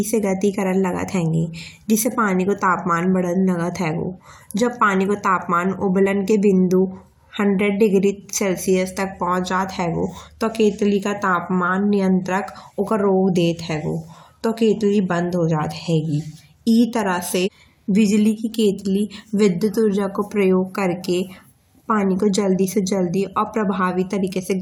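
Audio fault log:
Nothing to log here: the speech runs along without a single fault turning up anywhere.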